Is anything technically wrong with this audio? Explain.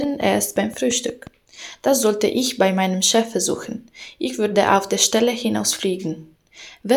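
Yes. From 0.04 to 1.28 s a train of clicks ticks steadily over the audio, about seven sharp, same-shaped pops at 5.7 per second, roughly as loud as the sound itself. It is likely interference from nearby equipment or a faulty connection or power supply injecting repeated pulses.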